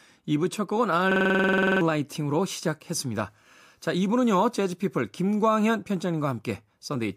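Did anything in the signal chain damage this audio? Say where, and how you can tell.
Yes. A system hang loop damages the speech from 1.12 to 1.81 s. This is a driver or buffer fault. One slice of audio, about 46 ms long, repeats exactly 15 times. That gives a rattling stutter at 21.5 Hz, close to a machine-gun sound. The loop length fits a 2048-sample buffer. The host or driver stopped supplying new data while the hardware kept cycling that ring buffer. Roughly 0.7 s of real speech is gone.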